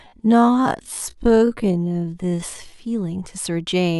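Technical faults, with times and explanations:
0.00–2.78 s, time-stretched section: the speech runs at about 0.57 times its normal pace while the pitch holds steady, so it drags. That's likely software stretching it to fit a length, repeating short slices to fill time, before the pace snaps back.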